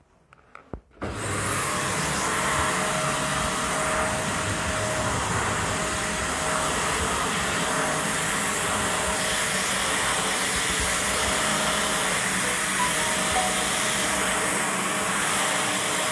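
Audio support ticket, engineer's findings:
No audible faults found in the recording; no dropouts, level jumps or discontinuities detected anywhere in the sound.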